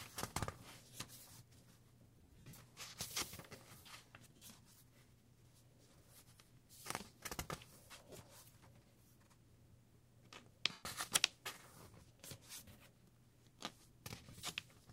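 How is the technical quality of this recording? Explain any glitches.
The recording has repeated dropouts from lost LE Audio frames. They occur at 0.40, 2.17–2.57, 4.36–4.42, 6.35–6.38, 8.10–8.19, 10.72–10.83, 12.54–12.62 and 14.31–14.33 s. The decoder refills each gap with the last spectrum under random signs. Tonal sound becomes a brief noisy smear. The longest gap, at 2.17 s, is scattered over about 0.4 s.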